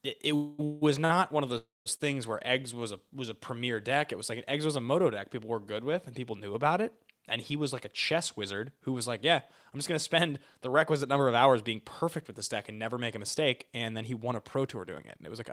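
A call audio freeze runs from 0.35 to 0.61 s, then from 0.65 to 0.83 s, and again from 1.58 to 1.88 s. Each time the last sound is held on as a fading buzz, and the third ends in silence. Packets were likely held up on the way, so the jitter buffer ran empty. The speech then resumes where it stopped, with nothing lost.

Two short stalls from a late packet fall at 1.05 to 1.12 s and 1.96 to 2.01 s. One packet was late each time. The receiver stretched the last sound, by 43 ms and then 37 ms. That sound is held slightly too long, with a faint buzz.

A jitter buffer speed-up runs from 7.54 to 8.97 s at 104 % speed. Another runs from 9.75 to 15.35 s at 106 %. The buffer held too much audio. The receiver cut tiny pitch-period slices to shrink it, removing roughly 0.3 s in the longer stretch. The speech in the longer stretch sounds hurried, but the pitch does not change.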